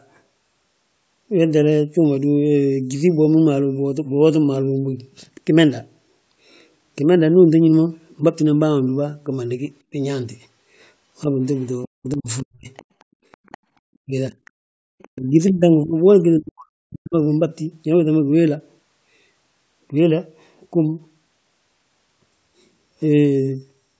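An echo canceller that likely failed to fully remove the loudspeaker signal lets the other side's voice leak through at 11.59 to 11.66 s, as a faint scrap about 40 dB below the talker. From 11.87 to 12.68 s, speech is suppressed in double talk: with both sides talking, the canceller likely could not separate its own talker from the echo and turned everything down. The talker's voice dips by up to about 40 dB, in pieces adding up to roughly half a second.

From 12.76 to 13.58 s the other side's voice likely leaks through again, now louder at about 25 dB below the talker, as a sustained second voice. At 14.06 to 14.33 s, the canceller likely suppresses speech again during double talk, giving a briefer duck of about 20 dB lasting around a tenth of a second.

Two more short leaks of the other side follow, likely from the same incomplete echo cancellation: one at 14.45 to 14.50 s, about 35 dB down, and one at 14.99 to 15.08 s, about 30 dB down. 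Right after that, from 15.08 to 17.41 s, speech is suppressed in double talk once more, with the canceller likely clamping down on both voices. The talker repeatedly cuts out or drops by up to about 40 dB, for around one and a half seconds in total, all within a band that stops at 8 kHz.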